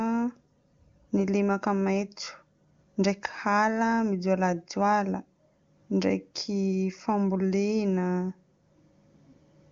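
Nothing stood out on listening to this speech recording, which has the band-limited sound of a wideband phone call, with nothing above about 7.4 kHz.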